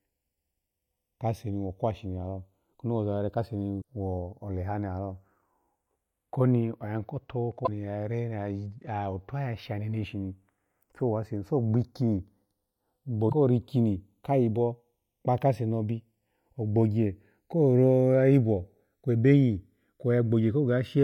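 Across the whole speech clip the two channels are drifting apart: they seem to come from devices on separate clocks, so the offset between them slowly grows, reaching well under a millisecond by the end. This fits a clock mismatch of something like 50 parts per million. Summed to mono, the comb-filter notches glide gradually through the spectrum, giving a slow flanging sweep. A fixed inter-channel delay would instead leave the notches parked in one place.

Damaged data in a compressed stream appears three times. The first is from 3.78 to 3.82 s, just before "kwo oleha ni lalo". The second is from 7.62 to 7.68 s, right after "ko tobabo". The third is from 13.26 to 13.33 s. At each point the decoder hits corrupted frames, loses sync and hunts for the next valid header. That produces a brief disturbance in the speech.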